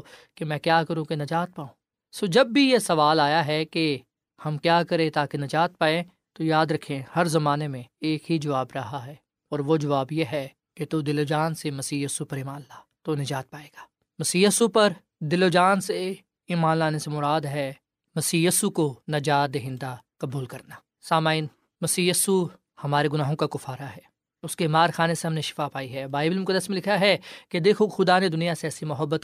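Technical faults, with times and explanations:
No technical faults detected.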